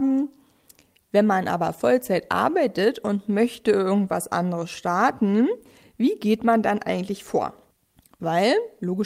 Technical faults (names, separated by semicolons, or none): none